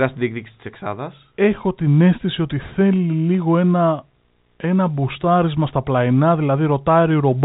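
No technical faults can be heard in the speech; it carries the expected sound of G.711 A-law telephone coding, with nothing above about 3.8 kHz.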